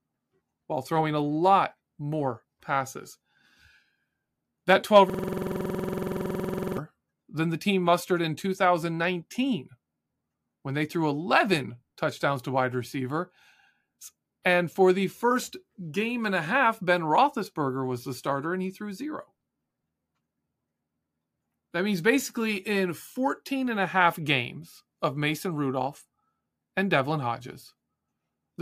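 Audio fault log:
5.10–6.78 s, system hang loop: the system froze while the audio hardware kept replaying its ring buffer, so one 46.44 ms slice of speech repeats 36 times at 21.5 Hz. The exact repetition makes a rapid mechanical stutter, a length that fits a 2048-sample buffer.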